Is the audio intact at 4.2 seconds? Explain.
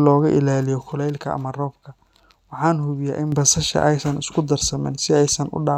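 Yes, the speech at 4.2 seconds is intact, with no audible fault at that moment.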